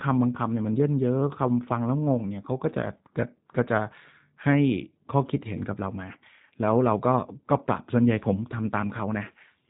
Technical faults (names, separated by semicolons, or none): G.729 codec